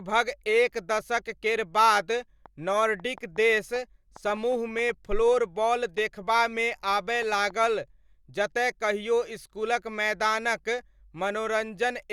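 Speech clip with a train of clicks from 2.46 to 7.65 s, right after "दशक केर बाद": about twenty uneven ticks, roughly 4.4 per second and as loud as the speech, likely from interference or a faulty connection.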